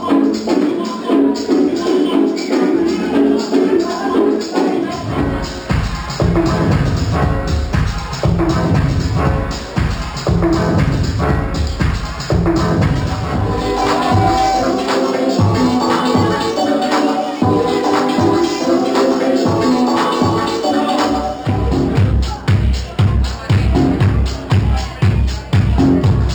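Imaging from linear upsampling runs through the whole clip. The sound appears to have been raised from about a 12 kHz rate by straight-line interpolation. This dulls the top of the original band and leaves a faint mirrored image between 6 and 12 kHz, roughly 30 dB down, heard as a light metallic shimmer.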